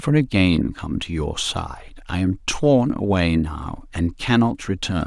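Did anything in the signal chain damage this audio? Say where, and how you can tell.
No, nothing along the chain has left a mark on this speech recording that I can hear, so there's no stage to point a finger at.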